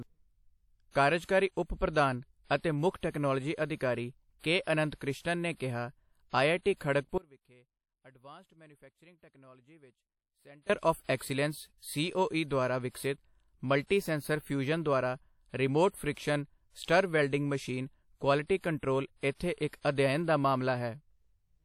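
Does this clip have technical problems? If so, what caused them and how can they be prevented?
Yes. The speech is plainly coloured by codec damage throughout. It sounds washy and ringing, with hiss that swells and shrinks with the voice. Nothing reaches above 19.7 kHz. The likely cause is WMA compression, which fits a bitrate around 48 kbps. Keep a higher bitrate or a lossless copy to prevent it.

From 7.18 to 10.70 s there is an audio dropout to a faint residue. It starts right after "ਕ੍ਰਿਸ਼ਨਨ ਨੇ ਕਿਹਾ ਆਈਆਈਟੀ". For about 3.5 s the signal cuts out abruptly. Only a faint sound remains, roughly 25 dB below normal. The path likely stayed live while the wanted feed was lost. Secure connections and monitor the input during recording.

Pre-echo smears two attacks. Hiss runs ahead of one onset from 11.16 to 11.21 s, spread over 44 ms. It happens again from 19.68 to 19.73 s, over 53 ms, between "ਮਸ਼ੀਨ ਕੁਆਲਿਟੀ ਕੰਟਰੋਲ ਇੱਥੇ" and "ਅਧਿਅਨ ਦਾ". 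The codec spread block noise into the quiet before each attack. Use an encoder with short-block switching to prevent it.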